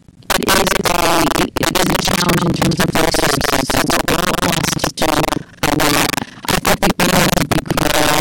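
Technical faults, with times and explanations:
Throughout: integer overflow. The signal is driven about 12 dB past full scale, and instead of being held at the limit, each peak that exceeds it wraps around to the opposite extreme of the range. Roughly one sample in twenty lands over the limit, concentrated on the loudest moments of the speech, so those moments break into violent, splintering cracks that are far harsher and more abrupt than ordinary clipping would sound.
Throughout: buffer tearing. The writer and reader of the playback ring buffer have drifted so that they cross partway through every period. Around two-fifths of each buffer carries audio from a lap earlier, roughly 150 ms stale, with hard joins on both sides. The splices repeat at 23.4 Hz, which fits a 2048-sample buffer, producing a steady robotic rattle that rides on the speech and stops whenever the signal falls silent.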